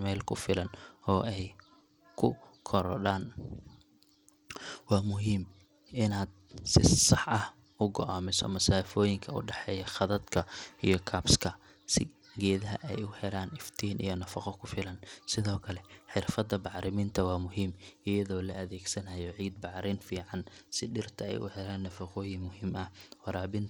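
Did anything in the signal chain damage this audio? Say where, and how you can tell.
Yes. Throughout the speech the treble is thin and flickers in and out, with a gritty, grainy haze and aliasing riding on the sound. That points to the codec stage, likely Bluetooth SBC compression at a starved bit pool that fits roughly 96 kbps, leaving the upper sub-bands with almost no bits.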